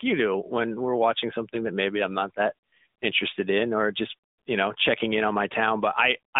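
AMR narrowband mobile codec damage runs through the whole clip: the speech is squeezed into roughly 200 Hz to 3.7 kHz, with nothing above 3.8 kHz. Each 20 ms frame is rebuilt from a vocal-tract model, leaving a plainly audible buzzy, synthetic edge that fits a mid-rate setting around 10.2 kbps.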